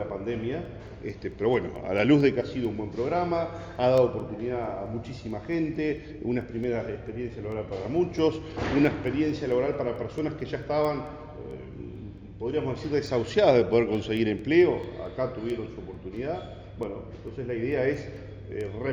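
From 0.21 to 18.83 s, word clock ticks recur roughly every 0.2 s as sharp one-sample slips, pointing to unlocked clocks around 100 ppm apart, showing as thin vertical spectrogram lines.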